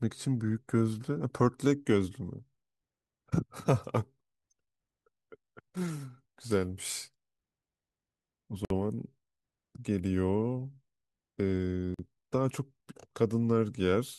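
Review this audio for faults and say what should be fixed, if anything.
The speech was assembled from separately encoded pieces that were joined without trimming, so each join keeps the encoder's start-up delay and the padding from the previous piece's final frame. The result is a gap at a join of encoded pieces: the sound cuts out at 8.65 to 8.70 s (about 54 ms) and again at 11.94 to 11.99 s (about 45 ms), with smeared edges, then resumes where it stopped. To prevent this, trim encoder delay and padding before joining, or encode the material as a single continuous piece.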